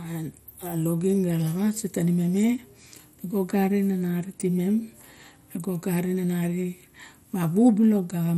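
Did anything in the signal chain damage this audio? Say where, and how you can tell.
Yes. MP2 compression damage runs through the whole speech clip, so the fault sits at the codec stage. Nothing is present above 16.6 kHz, the tone is dull, and there is a plainly audible gurgling, granular texture. The likely cause is MPEG Layer II coding at a low rate, which fits about 64 kbps: with too few bits for its 32 sub-bands, the encoder drops upper bands and quantises the remaining ones coarsely.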